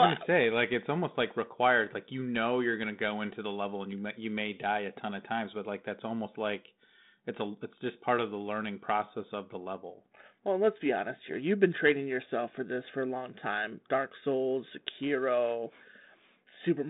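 Nothing goes wrong anywhere in the clip; the speech simply carries the usual sound of a 32 kbit/s G.726 telephone link, with the band held to roughly 150 Hz to 3.7 kHz and only a light trace of the codec's grain.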